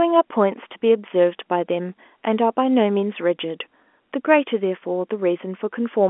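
No technical faults can be heard in this speech.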